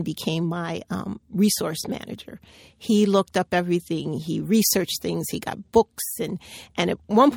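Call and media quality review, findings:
No faults found in the signal path; the speech arrives intact with no dropouts, glitches or level disturbances detectable by ear.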